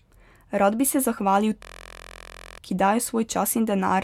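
From 1.63 to 2.58 s a system hang loop occurs. The driver froze while the hardware kept replaying one 23.2 ms slice, which fits a 1024-sample buffer. Some forty exact repeats form a steady buzz at 43.1 Hz, and about a second of speech is lost.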